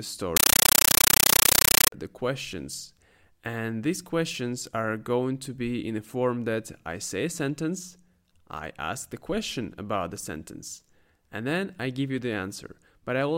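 From 0.37 s to 1.92 s the speech is replaced by a compressed stream played as audio. An AC-3 bitstream reached the output as raw samples instead of being decoded, which fits a 448 kbps stream. Each frame sounds as a 9.33 ms burst of noise followed by silent padding, 31.25 times a second, giving a harsh, very loud chattering static. On a waveform it shows as solid blocks separated by flat silence; a spectrogram shows evenly spaced broadband vertical stripes.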